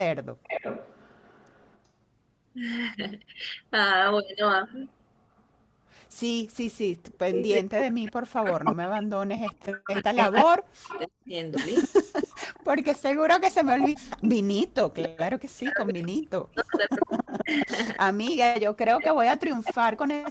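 From 0.43 to 1.79 s a delayed copy of the speech trails the original by 381 ms, about 15 dB down. This is an echo leak, likely a loudspeaker at the far end whose echo canceller let part of its microphone pickup return. The same 381 ms echo recurs very faintly at 5.4 s, about 40 dB down, and again from 7.08 to 7.39 s. From 8.65 s to the end the delay shifts to 275 ms and the echo sits only about 5 dB below the speech.

Speech suppressed in double talk first appears at 0.48 to 0.64 s as a brief dip of about 10 dB while the echo overlaps. Between 7.21 and 12.09 s, and again from 15.51 to 19.98 s, the level repeatedly collapses by up to about 40 dB, chopping the speech for several seconds. The canceller likely could not separate the talker from the returning echo and attenuated both.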